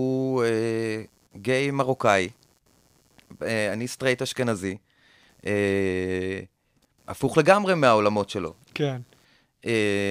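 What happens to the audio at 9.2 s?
At 9.2 s, computer activity noise runs under the speech, as it does throughout. Load changes in the computer shift the shared ground, producing a faint buzz pulsing around 150 times a second.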